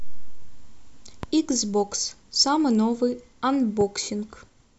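A sharp loud pop cuts across the speech at 1.23 to 1.26 s, peaking roughly 10 dB above the signal, and a softer one follows at 3.81 to 3.83 s, about 5 dB above, with the speech continuing underneath. Each is likely a brief voltage spike from a switch, static or driver glitch.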